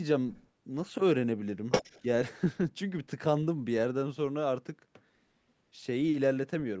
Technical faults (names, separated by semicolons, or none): other side's voice leaking through